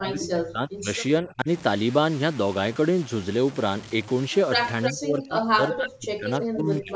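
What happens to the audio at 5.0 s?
At 5.0 s you're inside a stretch of speech suppressed in double talk that runs from 4.91 s to the end of the clip. With both sides talking at once, the echo canceller couldn't tell this talker apart from the loudspeaker echo and pulled everything down. The voice dips hard and patchily, at its deepest by something like 35 dB, so it comes across as chopped and half-missing for about two seconds. That's likely a double-talk response.

Right before it, from 4.83 s to 4.92 s, there's a short echo leak: a delayed copy of the voice arriving 322 ms late, only about 5 dB under the speech. It most likely comes from a loudspeaker echo the canceller didn't fully remove.

Underneath all of this, at 5.0 s and throughout, there's low bit depth without dither. The sound grains and crunches in step with the signal, with the error roughly 20 dB under it, which fits audio truncated to about 6 bits. 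The lack of dither is likely why the error tracks the sound so closely. The missing deep bass is just the normal call high-pass filter.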